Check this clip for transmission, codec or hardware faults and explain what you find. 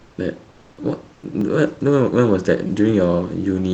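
Two faults appear: comfort noise replacing the background three times, and a repeated buffer twice.

Comfort noise in place of the background, at 0.00 to 0.17 s, 0.51 to 0.77 s and 1.13 to 1.23 s. The background turns into a steady, featureless hiss, about 3, 2 and 5 dB quieter. This is likely Opus discontinuous transmission filling the pauses. On a spectrogram it shows as smooth, uniform texture.

Repeated buffer, at 1.41 s and 2.67 to 2.69 s. A roughly 5 ms piece replays once, then four times, so the audio buzzes or clicks. This fits a 256-sample buffer. The waveform shows identical repeating cycles with hard joins.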